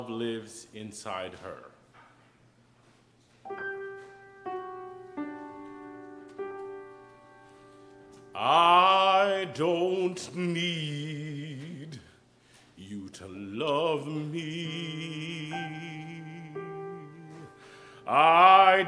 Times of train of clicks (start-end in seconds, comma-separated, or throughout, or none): none